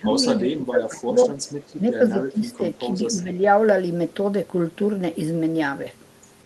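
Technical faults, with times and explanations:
0.0–0.21, 0.37–1.31, 1.77–2.63, 2.79–2.93 and 3.1–3.41 s: speech suppressed in double talk. The speech dips by up to about 20 dB in uneven pieces, likely from an echo canceller turning down overlapping talk. The original is attenuated rather than repeated.
1.40–1.44 and 2.50–2.55 s: echo leak. A faint scrap of speech returns 194 ms late, about 35 dB down, likely residual loudspeaker pickup. It is an added delayed copy, not a loss.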